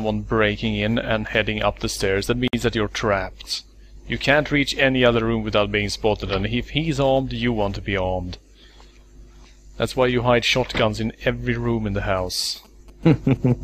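At 2.48 s, a gap at a join of encoded pieces opens for about 55 ms. Two separately encoded sections were butted together untrimmed. Encoder start delay and last-frame padding leave silence. Its edges are smeared by the codec. The sound resumes where it stopped.

From 12.18 s to 13.52 s come GSM signalling bursts. A nearby 2G phone is signalling, and the audio circuit rectifies its radio bursts. They sound like a galloping dit-dit-dit of short 217 Hz buzzes, roughly 30 dB below the main sound.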